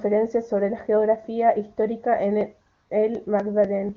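Starting at 2.41 s, right after "sobre la geografía histórica", periodic USB or driver dropouts: the driver stalls every 0.25 s until 3.89 s, skipping roughly 4 ms each time, heard as evenly spaced ticks. From 2.73 to 2.89 s, AMR comfort noise: the phone stops sending speech frames for 160 ms, and the receiver fills the gap with steady, smooth synthetic noise in place of the real background.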